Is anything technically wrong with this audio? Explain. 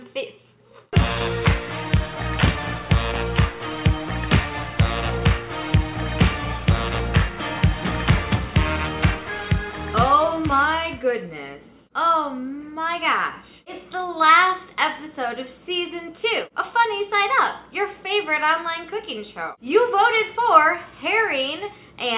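No, nothing stood out as technically wrong on listening.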